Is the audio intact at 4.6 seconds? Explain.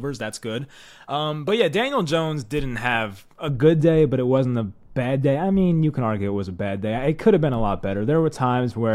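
No. From 3.48 s, just after "didn't have a", to the end, de-emphasis was applied wrongly: a treble cut meant to undo pre-emphasis hit audio without it, or hit it twice. Speech sounds dull and muffled, about 11 dB down at 10 kHz against 1 kHz, and a spectrogram shows the upper bands fading smoothly with frequency.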